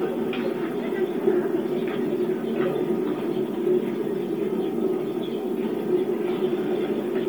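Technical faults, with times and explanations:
Throughout: Bluetooth LC3 compression, heavy, likely from a low-bitrate LE Audio link, fitting roughly 32 kbps. Upper-band detail is zeroed and refilled with noise, giving a grainy, breathy edge. A spectrogram shows speckled, patchy highs ending at 20.2 kHz, smeared in 10 ms blocks.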